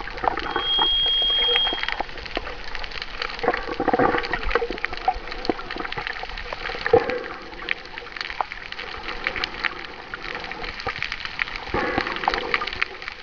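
From 0.44 to 2.11 s, loudspeaker feedback squeal: the microphone re-amplifies its own loudspeaker output at 3.2 kHz, and the tone swells within about a third of a second to roughly 5 dB above the program.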